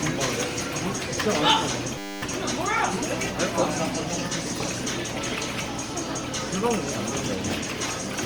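A recording of everyday sounds with a smeared, swirly, hollow quality throughout and blurred attacks, more than a single pass at 64 kbit/s Opus would cause. That points to generation loss, likely from about seven repeated lossy encodes, each on a shifted frame grid, unlike one low-bitrate encode's steady dullness. From 1.98 to 2.22 s a system hang loop replays one 10 ms piece 24 times. That produces a steady 100 Hz buzz rather than a stutter or a dropout, and little or no audio is missing around it.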